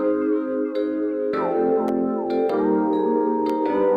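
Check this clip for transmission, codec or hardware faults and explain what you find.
One fault is present: an electrical switching spike at 1.88 s. It is a sharp snap lasting under 10 ms and peaking at roughly -20 dBFS, sitting on top of the underlying sound. The likely cause is a nearby switch, motor or static discharge arcing briefly, with the audio line picking up that burst of interference. It is heard as an added click rather than a break in the audio.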